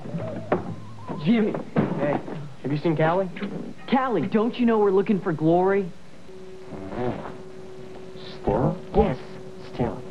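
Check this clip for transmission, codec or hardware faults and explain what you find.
One fault is present. From 6.29 s to the end at 10.1 s, the sound takes on a harsh, metallic buzz, its level pumping around 400 times a second with swings of about 60 dB. This is overlap-add ripple: windowed frames were rejoined with overlaps that don't sum evenly, so gain dips once per frame.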